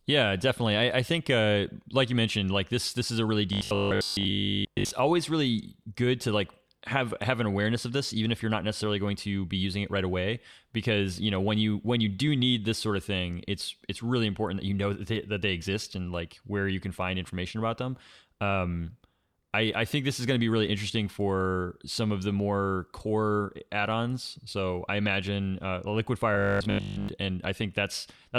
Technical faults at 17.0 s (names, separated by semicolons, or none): none